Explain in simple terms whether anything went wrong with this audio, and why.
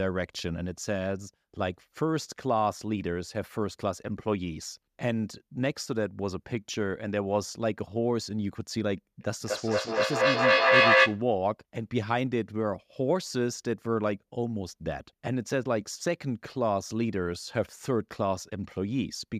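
From 9.2 to 11.3 s the speech keeps coming back about every fifth of a second, thin and ringing, building up louder than the speech itself. That's feedback echo between two devices.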